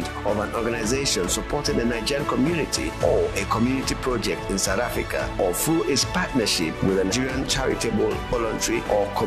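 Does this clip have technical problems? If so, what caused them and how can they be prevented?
Yes. Compressed frames are skipped at 7.11 s and 8.32 s. The audio jumps ahead by roughly 150 ms and then roughly 70 ms, which fits whole 23.2 ms frames missing or rejected as damaged. Unlike a dropout, there is no silent gap. Verifying file integrity after transfer and using error-protected storage or streaming prevents this.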